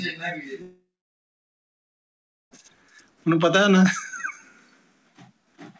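The audio cuts out from 0.62 s to 2.53 s. A fading buzz continues the last sound briefly. Then nearly 1.7 s of silence follows before sound resumes, with that stretch gone. This is likely a long network dropout. The audio passes through a call codec with nothing above 8 kHz, which fits G.722 at 64 kbps.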